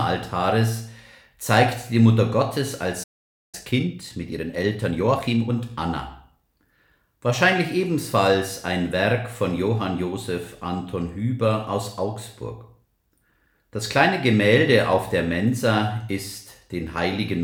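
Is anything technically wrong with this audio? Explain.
Yes. At 3.03 s there's a playback stall: the sound cuts out mid-flow and stays silent for about half a second (roughly 497 ms), until 3.55 s. That gap is most likely the player running dry on data or having its output thread held up, so nothing reached the output until it recovered.

Right after, from 3.55 s to 5.53 s, you get time-compressed catch-up. The player works off the backlog it built up during the stall by snipping out tiny slices and cross-fading across the joins, which runs the audio at about 1.25 times normal speed. Pitch stays put, but for those two seconds it sounds rushed.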